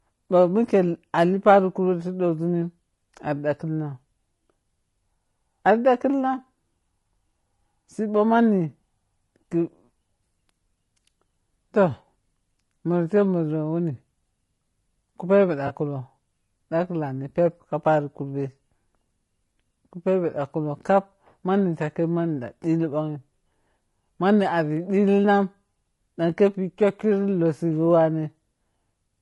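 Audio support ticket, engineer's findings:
Speech path likely running low-delay AAC compression (AAC-ELD) at a low rate, damage fits about 32 kbps. Short codec frames resolve pitch harmonics poorly, so voice is plainly rough and grainy throughout, noise filling between harmonics, top band thinned and synthetic.

AAC frame loss with concealment at 15.67 to 15.71 s, consistent with a single lost frame of about 20 ms. Decoder patched the gap from the previous good spectrum, leaving a brief smeared, noisy, phasey blip in the speech.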